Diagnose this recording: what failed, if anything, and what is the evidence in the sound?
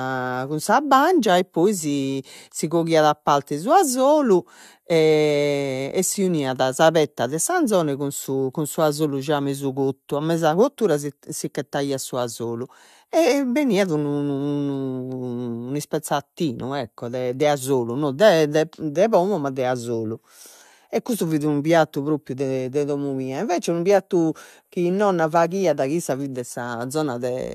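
Nothing failed here as far as the ear can tell; the speech comes through with no audible sign of trouble at any stage of the chain.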